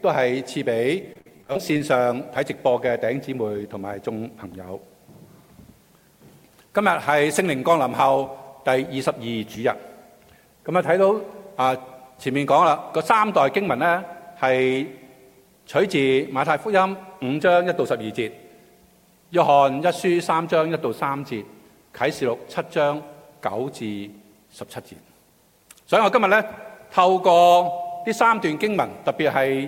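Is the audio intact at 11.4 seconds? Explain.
Yes, the audio is intact at 11.4 seconds, with no dropout, click, distortion or other fault to be heard at that point.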